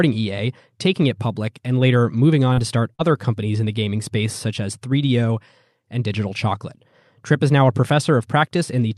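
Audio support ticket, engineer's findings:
Short concealed packet loss, 2.53–2.60 s after "public and later moving" and 2.95–3.02 s before "companies in the gaming". About 40 ms each missed the jitter buffer deadline. The decoder extrapolated the preceding sound and crossfaded back, leaving a brief smear or wobble.

Lost packet rebuilt from error correction, at 2.57–2.59 s and 2.99–3.01 s, inside those same gaps. A 20 ms frame each time was recovered from the low-bitrate redundant copy in the next packet. That frame sounds rougher and noisier against its neighbours. The call path is Opus, with the top end cut near 12 kHz and a sound that fits about 64 kbps.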